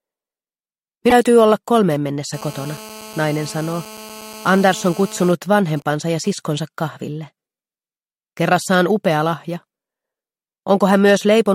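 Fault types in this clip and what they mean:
Damaged data in a compressed stream: A short blip from 1.09 to 1.12 s. Corrupted bytes in the compressed stream made the decoder misread those frames, lose its place and search for the next valid frame header before normal decoding resumed.
GSM phone buzz: A hard, raspy buzz at 217 Hz, rich in harmonics and about 19 dB below the audio, runs steadily from 2.34 to 5.32 s. A nearby 2G phone on a call transmitted radio bursts 217 times a second, which the audio circuitry rectified.
GSM signalling bursts: From 5.32 to 6.30 s the steady buzz gives way to even ticks with a longer 217 Hz buzz twice a second, roughly 25 dB down. The same phone, still in the call but with its user silent, sent only occasional groups of bursts.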